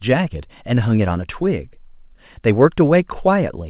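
No technical faults can be heard anywhere in this speech clip. It has come over a WebRTC call path working normally, and the sound stops at 4 kHz, giving the narrow telephone-band character that fits G.711 mu-law coding at 64 kbps.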